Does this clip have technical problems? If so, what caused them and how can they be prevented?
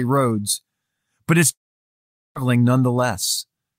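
Yes. Speech cuts out from 1.51 to 2.38 s, right after "but it's". A brief fading buzz continues the last sound, then about 0.8 s of silence follows. Audio resumes with roughly 0.84 s missing. This is likely a long network dropout. Prevent it with a more stable connection and a larger jitter buffer.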